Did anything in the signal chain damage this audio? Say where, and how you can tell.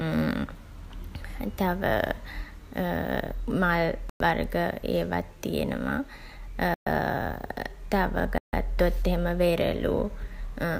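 Yes. Bluetooth stalls at 4.10 s, 6.74 s and 8.38 s cut the speech to silence for 109, 123 and 150 ms before it resumes. The likely stage is the wireless link, where held-up packets let the headphones' buffer run dry until resends arrived.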